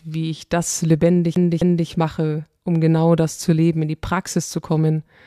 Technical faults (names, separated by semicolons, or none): CD stuck on one turn